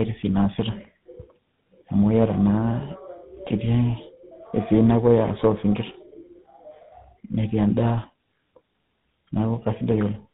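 From start to end the speech has tandem speech coding: it was decoded and re-coded by two speech codecs in turn, which points to a CVSD link followed by GSM full rate. It sounds rough, muffled and warbly. A spectrogram shows nothing above 3.8 kHz and smeared, blotchy harmonics.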